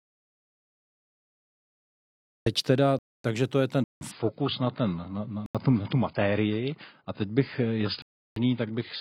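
The clip opens in an audio dropout to silence. Nothing is heard until 2.46 s, with no room tone at all. The input was likely lost while the recorder kept writing silence. Anything said before 2.46 s is gone.

A block of digital silence follows at 2.99 s, lasting 256 ms, just before "to je ten". Another comes at 3.84 s, lasting about 170 ms, right after "to je ten". Each cuts in and out without a fade. These holes point to output buffers left unfilled. The 170 ms gap fits an 8192-sample block.

At 4.11 s an adaptive stream at a lower bitrate takes over and runs to the end. It drops from AAC-LC at 96 kbit/s to 16 kbit/s. The change is abrupt, with no gap. Nothing remains above 5 kHz, so the treble is gone and codec artefacts rise.

Two more blocks of digital silence land in this stretch. One is at 5.46 s and lasts 85 ms, which sounds like a short hole. The other runs from 8.02 to 8.36 s, about 340 ms, which is a longer gap.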